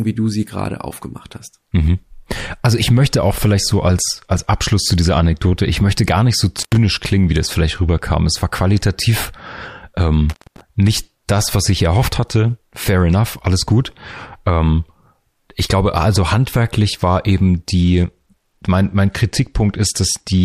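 It's a German speech clip with two technical problems. There's an intermittent contact, a loose plug or cable briefly opening: the sound cuts out with crackle at both edges from 6.58 to 6.77 s, between "möchte gar nicht so" and "klingen wie das vielleicht", with roughly 95 ms fully open. It happens again from 10.30 to 10.61 s, just before "nicht das was ich", with about 222 ms of dropout. Then from 17.81 s, right after "also handwerklich war eben", to the end there's a Bluetooth SBC bit pool drop. The treble goes dull and gritty grain creeps in as the link starves the upper sub-bands, which points to the bit pool falling from around 28 to 12, near 96 kbps.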